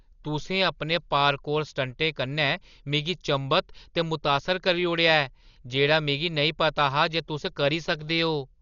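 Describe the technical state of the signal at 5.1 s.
At 5.1 s the speech is dull and band-limited, with a rough, fluttering grain around voiced tones, and this runs through the whole clip rather than starting there. The likely cause is heavy Dolby Digital compression: the encoder cuts the band and leaves many frequency lines without mantissa bits, so the decoder fills them with dither noise, consistent with a bitrate near 40 kbps. A spectrogram shows a hard ceiling at 6.9 kHz and speckled, blotchy noise between harmonics.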